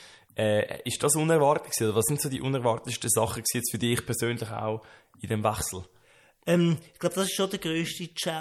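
Across the speech, s sounds swirl with metallic chirps, likely MP3 compression near 64 kbps; unlike simple filtering, the damage flickers.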